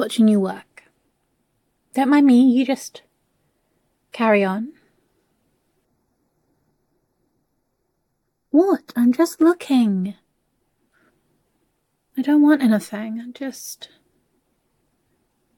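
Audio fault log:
5.85–9.41 s, channel delay (comb filtering): one channel runs late by a tiny amount, around a sixth of a millisecond, a few samples, and the two channels are then summed to mono. The identical content in each channel cancels where the offset puts it half a cycle out of step, cutting a deep fixed notch at around 3 kHz with further notches higher up, so the sound turns hollow and phasey for these few seconds before returning to full tone.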